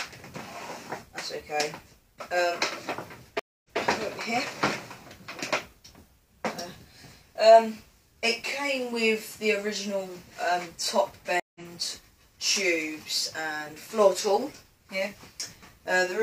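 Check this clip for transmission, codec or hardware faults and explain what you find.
Two stream reconnects are audible. At 3.39 to 3.78 s the connection breaks. The waveform flatlines for 248 ms and the spectrogram shows a blank band. A fresh decoder then resumes 139 ms earlier, so a short stretch repeats. At 11.40 to 11.61 s a 153 ms gap resumes about a tenth of a second later, skipping ahead.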